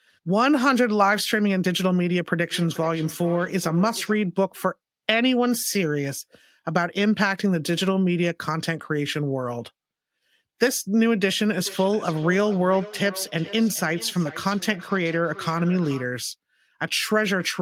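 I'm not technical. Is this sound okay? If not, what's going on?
No. From 2.51 to 4.22 s and 11.56 to 16.13 s there is feedback echo between two devices. One device replays the other's speech into its microphone, so each word returns about every 0.4 seconds.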